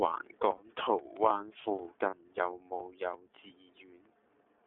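Throughout, the speech carries iLBC codec coloration: the band is confined to roughly 300 Hz to 3.5 kHz, and independently coded frames give a plainly rough, slightly synthetic texture, which fits iLBC's 13.33 kbps mode with 30 ms frames.

At 0.57 to 0.61 s and again at 2.1 to 2.14 s, lost iLBC frames occur, each consistent with a single missing 30 ms frame. The decoder bridges each gap by repeating the last pitch cycle blended with noise, heard as a brief held, faintly buzzy vowel. Normal speech returns almost immediately afterward.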